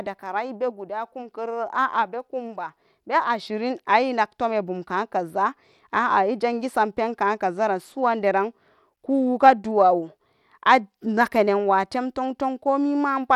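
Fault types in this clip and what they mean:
Bluetooth SBC compression: likely a low bit pool starving the upper sub-bands, so the speech treble flickers and turns gritty throughout. A spectrogram shows patchy, blocky energy above the midrange with aliasing smears.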